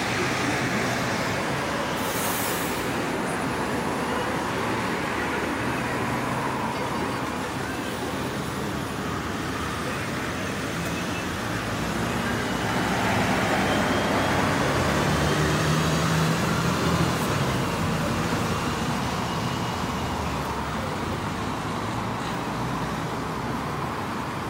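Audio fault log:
No faults are heard anywhere in this audio.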